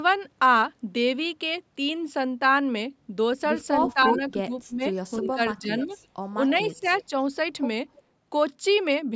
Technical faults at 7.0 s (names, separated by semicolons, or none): echo leak; speech suppressed in double talk